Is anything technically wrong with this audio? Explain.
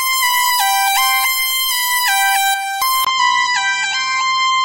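Yes. At 3.05 s, after a brief gap of about 20 ms, the input likely switched to a poorer device. From there to the end, nothing is heard above 7.8 kHz, so the sound turns duller at a similar level, with a new, faint noise floor underneath.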